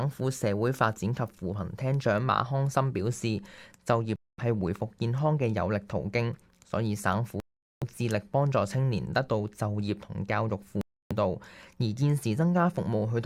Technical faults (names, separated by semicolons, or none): Bluetooth stall